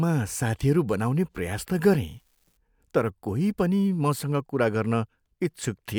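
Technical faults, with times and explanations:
2.07 to 2.57 s, unreliable data bit. One data line is failing, so that bit flips in random samples. Each flip adds a spike of the same size, about -50 dBFS. The result is a fine crackle or fizz lasting half a second, audible even in quiet gaps.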